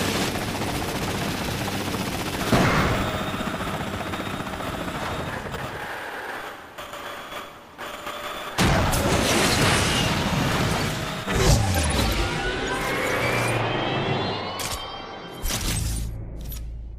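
Nothing technically wrong can be heard anywhere in the audio. No fault turns up at any point in the recording.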